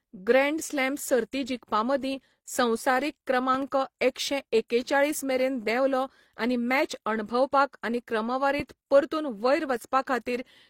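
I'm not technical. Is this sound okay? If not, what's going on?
No, there are a few problems.

The whole recording carries a mix of compression glitches, with the very top end missing (nothing comes through above about 16 kHz). That's the typical sound of transcoding between lossy codecs: the speech was likely compressed by one app, then recompressed by another. Each pass throws away detail and adds its own little glitches, so the faults from both end up layered together, and the dullest version of the treble is what's left.

There are also two loud pops. From 3.54 to 3.64 s you get a quick double pop, a bit louder than the speech, right before "एकशे एकेचाळीस मेरेन". At about 8.6 s there's a single one, clearly louder than the voice, just before "परतून वयर". The speech keeps going underneath both. A jolt like that is likely a cable being bumped, a switch, static, or a hiccup in the recording device.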